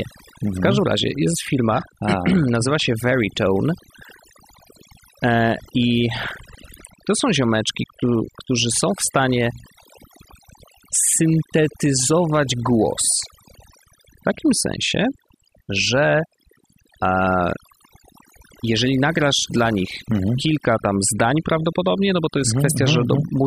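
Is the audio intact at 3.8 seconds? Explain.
No. At 3.8 seconds, as through the whole of this speech clip, the fault is overdone noise removal: a noise reduction stage was pushed far too hard, so any frequency band sitting near its noise estimate gets pulled down to almost nothing, including the softer parts of the voice. The pauses collapse into near silence sprinkled with twinkling specks.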